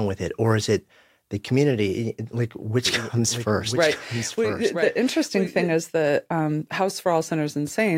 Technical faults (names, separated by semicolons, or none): doubled audio track